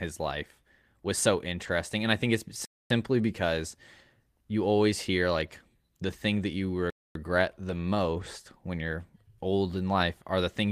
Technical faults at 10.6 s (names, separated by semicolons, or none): none